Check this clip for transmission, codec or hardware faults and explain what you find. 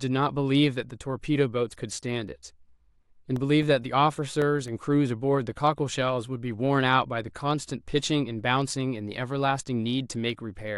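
One playback fault is audible: CD scratch ticks in the speech between 3.36 and 4.68 s. A scratch on the disc destroyed more data than the player's error correction could rebuild, once per rotation, so the player filled or muted those samples. The result is six short ticks at a steady rate of about four or five per second, the longest only a few milliseconds, of uneven strength.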